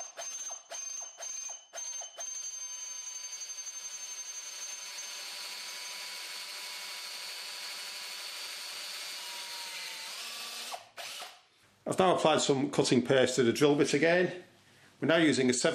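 No technical faults can be heard anywhere in this audio.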